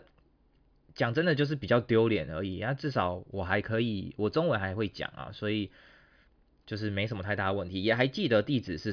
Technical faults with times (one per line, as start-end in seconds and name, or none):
none